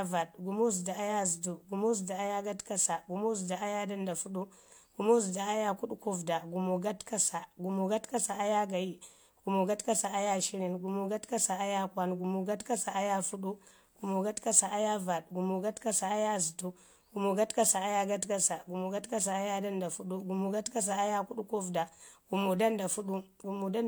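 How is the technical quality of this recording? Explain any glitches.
Nothing in the recording stood out as a technical problem on listening, so there are no glitches to explain.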